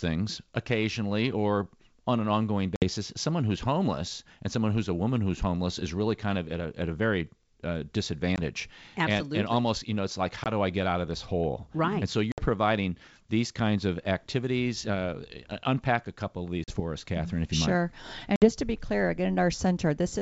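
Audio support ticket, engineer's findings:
Packet loss on an ADPCM call: hard-edged silent gaps at 2.76 s (after "or on an ongoing"), 8.36, 10.44, 12.32, 16.64 (after "unpack a couple of") and 18.36 s (before "to be clear"), 20 to 60 ms lost, one to three packets each. Decoder predictor and step size desynchronise, so audio resumes with brief distortion. G.722 wideband path intact.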